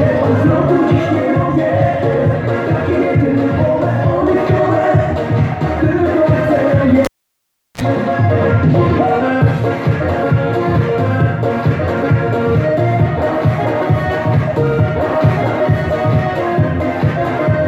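At 7.05 s a cable is pulled and plugged in: a pop, about 0.71 s of near silence, then a 35 ms burst of 60 Hz mains buzz as the bare tip makes contact, and a second pop at 7.81 s. That buzz separates it from a plain dropout.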